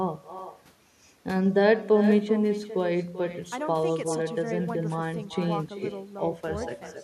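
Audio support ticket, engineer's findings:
Echo with no canceller, throughout the clip. Every phrase trails a quieter, thinner copy, about 12 dB below the direct sound, arriving roughly 0.4 s later. Probable component: far-end loudspeaker-to-mic path with no acoustic echo cancellation. Far end plays the call aloud, its mic recaptures it, and the network round trip returns it to the talker.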